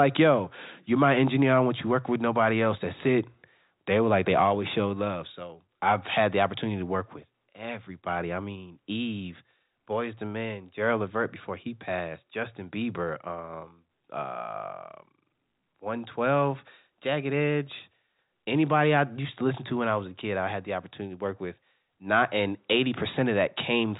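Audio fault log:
The speech carries no faults, and the audio sits within the narrow telephone band with nothing heard above 3.8 kHz, consistent with a G.711 A-law telephone path at 64 kbps working as intended.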